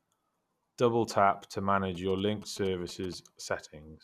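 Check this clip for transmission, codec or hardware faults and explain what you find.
GSM signalling bursts run from 1.95 to 3.14 s, starting just after "tap to". A nearby 2G phone exchanging signalling sends short groups of radio pulses, and the audio circuitry rectifies them into the signal path. The result is a galloping dit-dit-dit of short buzzes repeating at about 217 Hz, sitting roughly 20 dB below the speech for just over a second.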